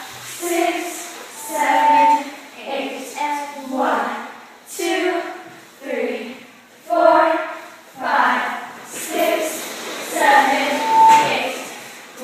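A microphone is picking up the loudspeaker it feeds, and around 893 Hz the loop gain climbs past one, producing loudspeaker feedback squeal twice: from 1.35 to 2.27 s and from 10.66 to 11.47 s. Each time a single steady tone at that frequency swells out of the audio, over roughly half a second the first time and about 0.4 s the second, peaks at about 10 dB above the surrounding sound, and then stops.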